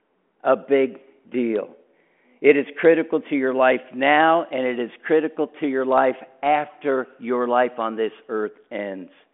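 Nothing stood out on listening to this speech, which comes through the narrow telephone band of a 40 kbit/s G.726 link with nothing above about 3.8 kHz.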